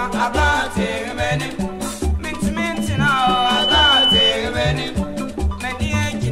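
Loudspeaker feedback squeal appears from 2.73 to 4.35 s: a pure tone at 3 kHz swells over roughly a second until it sits about 5 dB above the audio. A microphone is hearing its own loudspeaker, and at 3 kHz the loop gain passes one, so that frequency keeps reinforcing itself.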